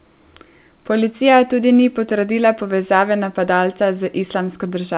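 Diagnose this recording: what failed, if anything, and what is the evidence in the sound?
Nothing has failed: the speech arrives intact through a WebRTC call path, with no content above 4 kHz, the narrowband telephone limit that fits G.711 A-law coding at 64 kbps.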